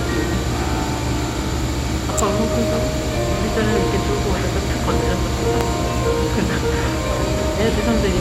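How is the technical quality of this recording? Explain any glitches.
Two sharp snaps break into the recording, at 2.18 s and 5.61 s. Each is a brief, hard crack sitting on top of the sound. The first peaks at about -5 dBFS, and the second hits roughly full scale. These are electrical switching spikes, likely from a nearby switch, motor or static discharge arcing for an instant. The audio line picks up that burst of interference and adds it directly to the signal, which is why it lands as an abrupt snap.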